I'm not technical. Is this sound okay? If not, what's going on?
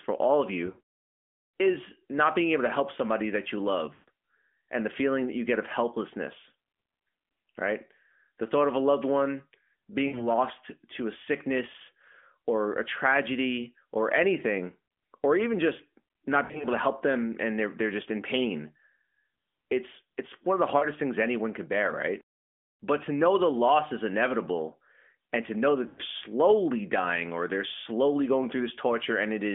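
No. There are lost AMR speech frames, gaps where parts of the phone signal arrived damaged and were thrown away, at 0.66, 3.94, 10.08, 16.44, 20.78 and 25.88 seconds. The phone fills each gap by stretching the last sound and fading it. You hear brief smeared dips, and the voice returns a little rough.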